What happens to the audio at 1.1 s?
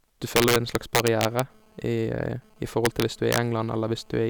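At 1.1 s the speech is inside a stretch of integer overflow running from 0.36 to 1.40 s. The signal is driven about 5 dB past the integer limit, and instead of stopping at full scale each over-range peak wraps to the opposite sign. The loud syllables break up into harsh, violent cracks, far sharper than ordinary clipping.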